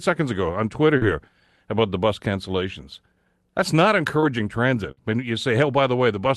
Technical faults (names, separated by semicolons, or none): short concealed packet loss; burst of packet loss